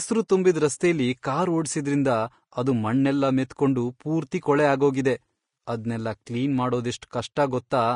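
From start to finish, the speech is hissy and grainy, with roughened tones, blurred attacks and nothing above 10.5 kHz. This is likely Vorbis compression at a low bitrate, around 35 kbps.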